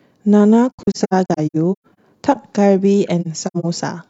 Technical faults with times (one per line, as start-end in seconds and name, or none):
0.70-1.97 AAC frame loss with muting
3.21-3.65 AAC frame loss with muting